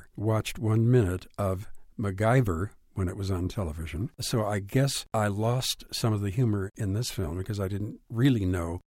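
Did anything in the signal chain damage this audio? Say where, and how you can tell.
No, nothing along the way seems to have damaged this speech; I can't hear anything pointing to trouble at any stage of the chain.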